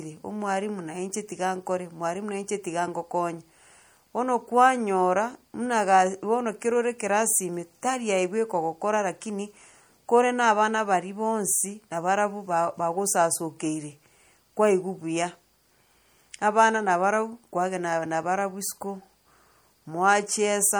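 Speech with a plainly audible watery, swirly smear throughout, likely from MP3 compression at a low bitrate, around 64 kbps, with weak frequency components flickering between frames.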